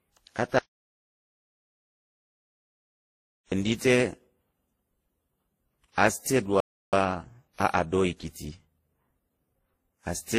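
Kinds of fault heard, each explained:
Transcoding between lossy codecs: Throughout the speech, the top end is cut off, and several kinds of coding damage sit on top of one another. Each stage re-spent its bits on the previous stage's errors and added its own. The cause is likely a chain of three encoders, with a low-rate Opus pass first, then WMA, then Vorbis. The lowest cut-off in that chain survives to the end, and the mixed artefacts point to that layered history.
Audio dropout to silence: From 0.58 s to 3.52 s the speech cuts out mid-flow into silence, with no room tone at all, for about 2.93 s. The likely cause is lost input, such as a disconnected device, a failed link or a stray mute, while recording carried on writing silence. Whatever was said in that span is gone. The speech resumes abruptly on "ɗi te".
Playback stall: At 6.60 s the speech halts mid-flow and stays silent until 6.93 s, a gap of about 0.33 s. 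This likely happened because the player ran dry of data or had its processing thread blocked, so output stopped until it recovered. Unlike the earlier dropout, nothing appears to be lost here. The speech picks up where it left off, and the player then has a backlog to work through.
Time-compressed catch-up: From 6.93 s to 9.93 s, straight after the stall, the speech runs hurried at 1.1 times normal speed while keeping its normal pitch. The player is clearing its backlog by snipping out small fragments and cross-fading across the joins. That shortens the audio without shifting pitch, but it leaves a rushed delivery for those three seconds until playback is back on schedule.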